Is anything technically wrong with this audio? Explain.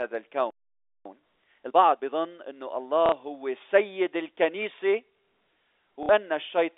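Yes. The speech carries three kinds of fault, heard through a telephone-band channel that passes roughly 300 Hz to 3.6 kHz.

Playback stall, 0.50 to 1.05 s: The player most likely ran short of buffered data, or its output thread was held up, so nothing was sent to the output for about 0.55 s. The speech cuts off in mid-flow into dead silence and then resumes, which makes it sound as though the line froze for half a second.

Time-compressed catch-up, 1.05 to 2.15 s: Having fallen behind during the stall, the player works off its backlog by cutting out short slices and cross-fading the edges, playing the speech at 1.5 times normal speed without changing its pitch. The talker sounds rushed while the voice keeps its register until normal pacing returns at 2.15 s.

Packet loss with last packet repeated, 3.06 to 3.12 s and 6.03 to 6.09 s: In each gap about 60 ms of audio never arrived, a span that points to two 30 ms packets. 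The receiver filled it by replaying the last good packet. Because the same packet repeats at the packet rate, the run buzzes at roughly 33 Hz, heard as a brief robotic stutter each time.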